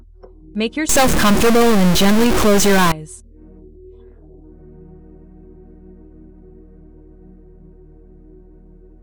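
From 0.89 to 2.92 s a harsh, buzzy distortion sets in, likely a stuck bit, with one data bit pinned and pushing values off by roughly -10 dBFS.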